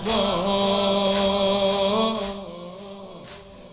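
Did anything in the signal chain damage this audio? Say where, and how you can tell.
No, nothing in the chain damaged this audio. The call path has nothing above 4 kHz, which fits a narrowband G.711 call codec, and the gradual level moves ride smoothly like a fader.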